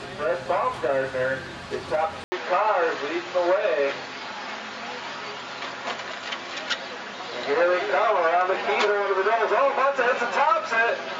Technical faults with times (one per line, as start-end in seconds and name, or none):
2.24-11.19 input switched to a poorer device